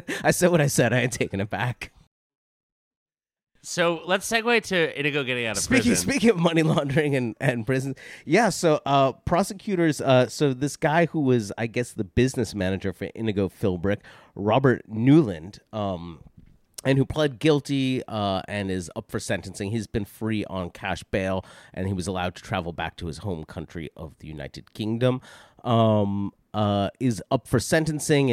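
Nothing here calls for comment, since the speech runs along without a single technical fault turning up anywhere in it.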